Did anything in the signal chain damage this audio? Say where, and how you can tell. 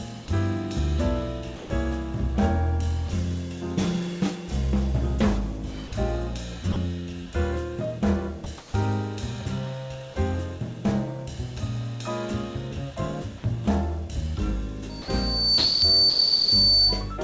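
Yes. Call processing stage: sound gives way to steady noise at 1.56–1.70, 5.88–5.92, 6.72–6.76, 15.02–15.08, 15.58–15.82 and 16.10–16.52 s. This is likely sound dropped by the voice detector, with comfort noise filling in.

At 8.58–8.74 s the real background turns flat and featureless, about 3 dB quieter. That points to comfort noise in place of the background during a transmission pause.

From 14.89 to 17.12 s a 4.5 kHz tone swells over roughly 0.7 s to about 10 dB above the sound. This is loudspeaker feedback squeal from an acoustic loop.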